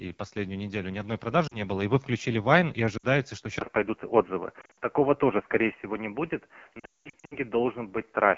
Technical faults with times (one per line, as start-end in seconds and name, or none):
0.00-8.37 AMR wideband (HD Voice) codec
1.47-1.57 lost AMR speech frames
2.97-3.05 lost AMR speech frames
3.59-8.37 input switched to a poorer device
4.61-4.74 lost AMR speech frames
6.79-7.37 lost AMR speech frames